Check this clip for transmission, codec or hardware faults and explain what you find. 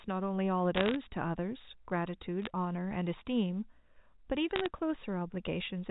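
Short bursts of crackle, sharp ticks over unchanged speech, come from bit errors on a digital phone line at 0.75 to 0.96 s, 2.42 to 2.5 s and 4.56 to 4.66 s. Flipped bits, under one percent, each corrupt a single G.711 sample. Hits on the sign or high bits produce the loudest ticks.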